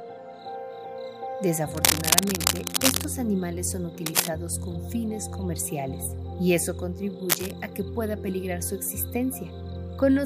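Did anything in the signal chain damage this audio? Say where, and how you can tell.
Yes: cable scratch noise in the analogue wiring, from 1.71 to 3.06 s (louder than the sound), 4.06 to 4.28 s and 7.29 to 7.52 s. It is likely a worn connector whose shifting contact adds ragged broadband smears on the spectrogram and spiky, uneven bursts in the waveform.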